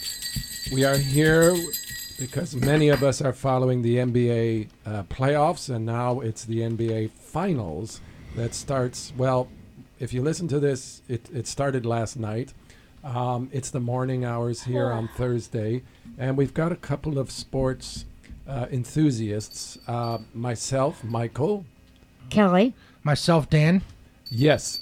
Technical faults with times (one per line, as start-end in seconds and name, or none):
none